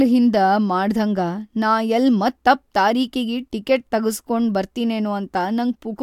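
No audible technical faults turn up anywhere in this speech recording.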